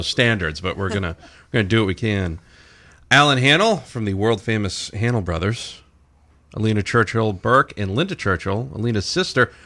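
No dropouts, clicks, distortion or other technical faults can be heard anywhere in the speech.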